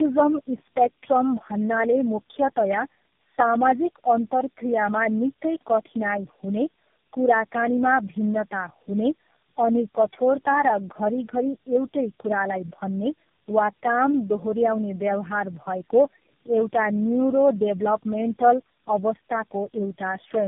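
Rough, muffled and warbly from start to finish, the speech has a smeared, watery quality, and nothing reaches above 3.5 kHz. This is tandem speech coding. The call appears to have passed through several narrowband speech codecs in a row, which fits four low-rate coders of the GSM, AMR and G.723.1 kind. Each decoded the previous one's damaged output and encoded it again, so the distortions compound across the whole clip.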